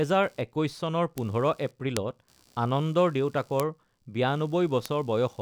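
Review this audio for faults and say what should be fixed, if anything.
A low buzzing, pulsing at around 70 Hz and sitting roughly 35 dB below the speech, runs through the whole clip. It rises and falls with something other than the talker. This is computer activity noise: load swings in the processor, graphics card or mouse move the ground that the audio circuitry shares, and that current leaks into the signal as buzz. To prevent it, use a USB isolator or an external, separately powered audio interface and keep the analogue input off the computer's ground.

Four sharp ticks, each spread across the whole spectrum and unrelated to the speech, occur at 1.18, 1.97, 3.60 and 4.86 s. They peak at about −11 dBFS at 1.18 and 4.86 s and about −5 dBFS at 1.97 and 3.60 s. These are bit error spikes: a single flipped bit makes one sample, or a very short run of samples, jump by a power of two and return at once. 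To prevent them, check the digital link, cabling and memory path for errors, and repair these four instants with a click-removal tool.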